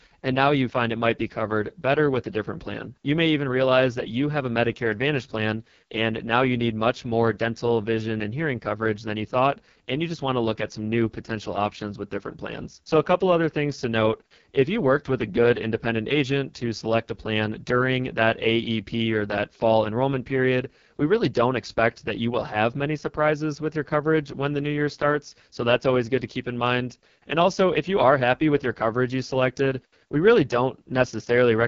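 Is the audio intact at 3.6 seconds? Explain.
No, at 3.6 seconds the speech carries AMR wideband (HD Voice) codec damage that runs through the whole clip. The harsh, raspy texture points to the codec's lowest mode, around 6.6 kbit/s, where its pulse-based vocal model coarsens the voice, and nothing is heard above 7.3 kHz.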